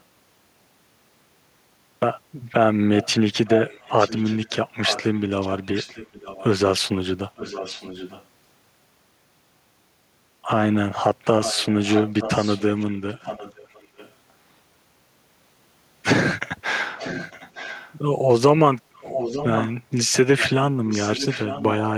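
Echo leak runs through this speech clip. A delayed copy trails the talker by about 0.9 s. It appears at 2.96–6.45, 7.36–8.25, 11.42–14.12, 16.98–17.95, 18.97–19.71, 20.38–20.54 and 20.89–21.9 s. It starts faint, well below the speech. Later it grows louder, nearly as strong by 19 s. The likely cause is a far end on loudspeaker whose echo canceller let its own microphone pick-up return down the line.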